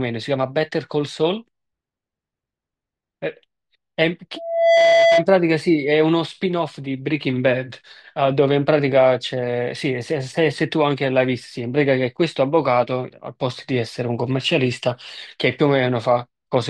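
At 4.36 s a loudspeaker feedback squeal starts and runs until 5.26 s. A single tone at 668 Hz swells out of the speech in under half a second. It ends up a little louder than the talker. The microphone is hearing the loudspeaker it drives. Around 668 Hz the loop gain has passed one, so that frequency keeps feeding itself and grows into a steady howl.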